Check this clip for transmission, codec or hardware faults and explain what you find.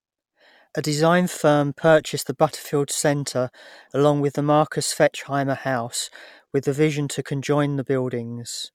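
Listening through the speech in this recording, nothing stood out as a problem.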